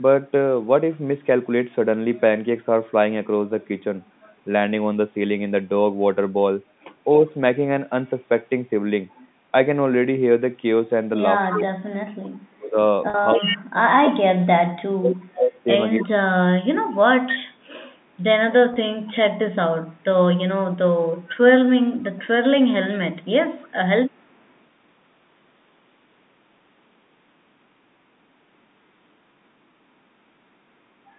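Echo leak at 7.30–7.34 s and again at 9.10–9.28 s: a faint delayed copy of the sound, about 35 dB and about 30 dB below the speech, trails it by 283 ms. Likely cause: a loudspeaker on one side whose echo canceller let some of its microphone pickup slip back.

Speech suppressed in double talk from 11.48 to 16.17 s: while both sides talk, the near voice dips and breaks up for about 3 s in total, falling as far as about 35 dB. The likely cause is the echo canceller failing to tell this talker from the loudspeaker echo and turning both down.

A much stronger echo leak runs from 11.50 to 13.58 s inside that stretch, only about 5 dB under the speech and still 283 ms late.

Packet loss with pitch repetition at 13.10–13.14 s: about 40 ms of audio, which fits two lost packets, is bridged by repeating the last pitch period, so the sound holds briefly on a buzzy tone before normal speech resumes.

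Further echo leak follows at 15.99–16.05 s, about 25 dB down, then a long stretch from 17.60 to 24.54 s at about 30 dB below the speech.

Packet loss with pitch repetition at 18.74 s covers about 20 ms and is heard as a short held buzz.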